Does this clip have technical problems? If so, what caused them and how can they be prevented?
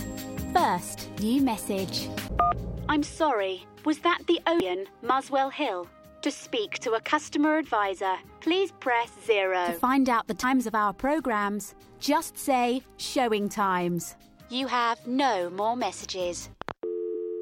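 Yes: damaged data in a compressed stream causes brief blips at 4.6, 10.43 and 17.14 s. Corrupted bytes make the decoder misread frames and resync at the next header, giving a short glitch. Verify transfers with checksums.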